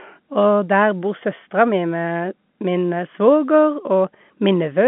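No faults present; the speech sits on a working G.711 mu-law telephone path at 64 kbps, with the line band spanning 150 Hz to 3.4 kHz and nothing above 3.8 kHz.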